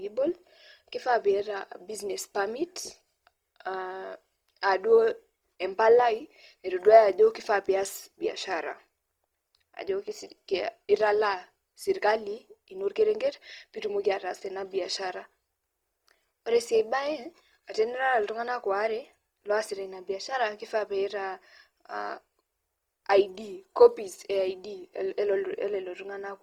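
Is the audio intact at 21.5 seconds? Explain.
No, not really. At 21.5 seconds you're hearing the same damage that runs through the whole speech clip: a grainy, rough texture where tonal parts of the sound turn noisy. That's typical of Opus compression, likely in its CELT music mode at around 24 kbps. When bits run short, the encoder keeps each band's energy but fills in detail by folding lower bands up or injecting noise. So the full bandwidth survives but sounds coarse.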